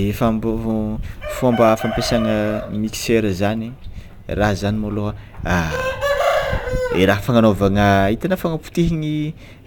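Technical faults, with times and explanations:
Throughout: sample clock jitter. The converter's timing wanders by a few microseconds, so each sample lands off its true instant. Steep, fast-changing parts of the speech suffer most. A faint roughness about 30 dB below the speech follows loud, bright sounds and vanishes in pauses.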